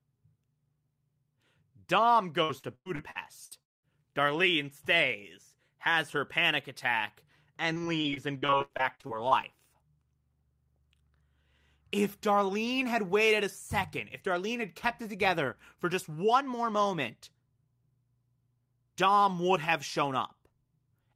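Repeated packet loss (robotic sound) runs from 2.43 to 3.85 s: seven gaps, the longest about 0.2 s, are each patched by stretching the preceding speech, so over a third of the span is filler and the speech turns choppy with pieces missing. It recurs just after "has her panic attack", from 7.73 to 9.45 s, as seventeen shorter gaps of up to 78 ms covering about a quarter of the stretch, giving more frequent breaks in the speech.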